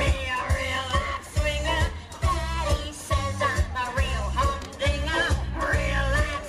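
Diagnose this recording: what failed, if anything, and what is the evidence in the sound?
No failure can be heard at any stage, from the analogue path through conversion, buffering, processing and storage to playback, and the signal holds steady in level, continuity and timing for the whole recording.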